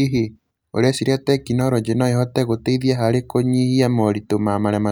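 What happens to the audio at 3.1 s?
Nothing goes wrong at 3.1 s; the speech carries on intact through that moment with no dropout, click or distortion.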